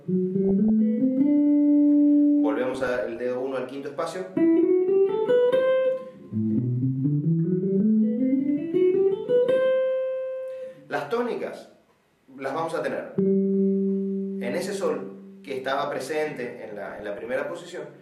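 DAB burbling occurs at 0.45–0.70 s, 2.75–3.19 s and 16.91–17.30 s. Weak reception let bit errors, around 0.4 to 0.5 percent, slip past error correction into the MP2 data. Corrupted samples put short noise blips into single sub-bands, and damaged scale factors make sub-bands jump in level for up to a frame.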